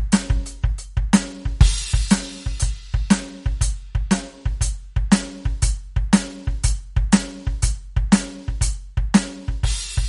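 From the start of the music to the end, nothing is present above 11.2 kHz, and the audible damage sounds like MP3 compression, likely at a low bitrate around 49 kbps. With too few bits to spend, the encoder has cut the treble at a fixed point and dropped weaker frequency components, which flicker in and out between frames. The result is a dull top end with a watery, swirling texture and softened attacks.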